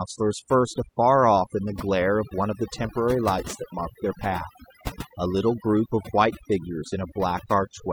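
Overdone noise removal runs through the whole speech clip. A noise reducer set too aggressively drives individual frequency bands down whenever they sit near its noise estimate, taking softer parts of the voice with them, so the background collapses into twinkling near-silence.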